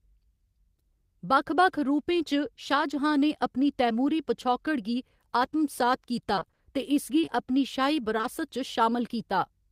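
From 6.35 to 6.59 s the speech turns choppy and robotic. This is repeated packet loss: six gaps of about 20 ms each, half the stretch patched by extending the preceding sound.

At 7.21 and 7.25 s, then 8.17 and 8.21 s, brief smears or wobbles appear. This is short concealed packet loss, each 20 ms hole filled by continuing the last sound.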